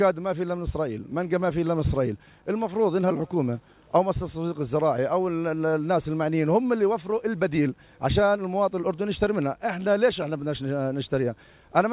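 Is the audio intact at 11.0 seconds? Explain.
Yes, the audio is intact at 11.0 seconds, with no dropout, glitch or other fault at that moment.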